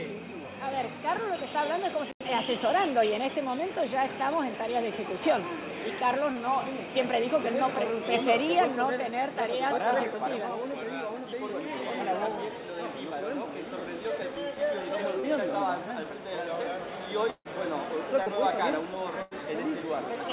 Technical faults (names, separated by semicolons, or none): short concealed packet loss; burst of packet loss